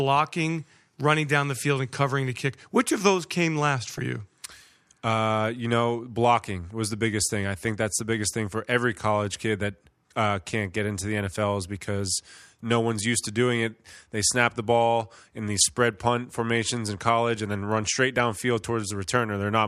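DAB burbling at 3.94–4.01 s after "of those came last", 15.49–15.65 s after "snap the ball in", and 18.17 s after "and then run straight": bit errors slip past error correction into the MP2 data, so wrong samples put short blips of noise in single sub-bands. A dropout would go silent instead.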